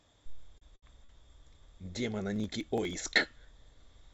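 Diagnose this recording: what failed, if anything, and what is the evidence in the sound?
Network and jitter buffer: three short stalls from late packets, at 0.58 to 0.72 s, 0.76 to 0.84 s and 1.04 to 1.11 s. The speech is held for 35, 68 and 42 ms, with a slight buzz or dip. Packets arrived late and the receiver stretched the last sound. Nothing is lost.

Driver or buffer stage: processor overload crackle from 2.36 to 2.93 s. It is a burst of crackle or gritty tearing over the speech. Around ten buffer deadlines were missed. The tiny skips point to buffers well under a millisecond long, and each skipped buffer leaves a hard-edged gap.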